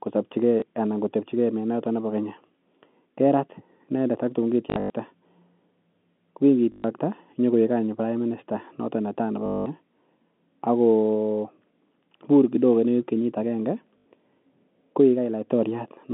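Packet loss with the last packet repeated hits this telephone-band speech clip at 0.60–0.62 s (just before "anan kotepchigei menotok"), 4.7–4.9 s, 6.72–6.84 s, 9.46–9.66 s and 13.98–14.06 s. Each gap was filled by replaying the previous chunk, so the longer runs buzz at a rate that fits 20 ms packets.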